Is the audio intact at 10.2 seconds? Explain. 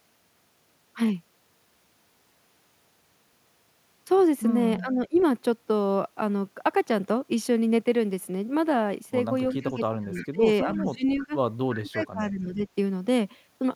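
No. At 10.2 s the speech sits inside a stretch of speech suppressed in double talk running from 9.54 to 11.34 s. Across roughly one and a half seconds of that span the speech level is pulled down in uneven pieces, dipping by up to about 20 dB. The likely cause is an echo canceller that, with both ends talking at once, could not tell the near talker from loudspeaker echo and attenuated everything it heard.

Overlapping that moment, from 10.14 to 10.28 s, is a short echo leak: a faint delayed copy of the speech, trailing the original by 326 ms and sitting somewhere around 20 dB below it. It comes through as a brief scrap rather than a sustained echo. This is likely residual loudspeaker pickup at one end that the echo canceller failed to remove and that was sent back into the call.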